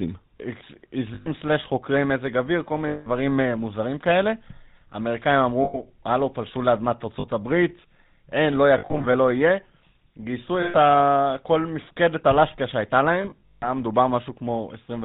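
Throughout, the speech carries the buzzy, gravelly texture of the GSM full-rate codec, which fits its 13 kbps rate. The voice is rebuilt from a vocal-tract model driven by sparse, regular pulses, with nothing above 4 kHz, giving a coarse rasp rather than the muffled smearing of plain low-bitrate compression.

Lost GSM frames break in at 1.14 s (120 ms), 2.88 s (180 ms), 5.64 s (100 ms), 7.20 s (40 ms), 8.78 s (scattered over 360 ms, longest run about 70 ms), 10.62 s (120 ms) and 13.22 s (scattered over 400 ms, longest run about 150 ms). Each gap is filled by repeating the last good frame. That produces a held, metallic ring, unlike the abrupt silence of a dropout.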